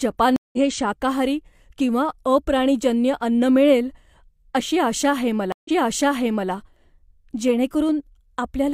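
At 0.36 s a stream reconnect leaves 168 ms of silence, then the speech resumes slightly ahead at "शाकाहारी किंवा अप्राणीजन्य अन्न". At 5.52 s, after "अशी आशा आहे", a second reconnect silences 130 ms and restarts 853 ms earlier, repeating speech. Unlike a simple dropout, the timeline jumps.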